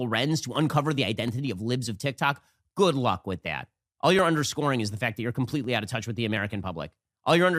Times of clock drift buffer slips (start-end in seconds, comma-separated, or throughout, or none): 0.56-7.09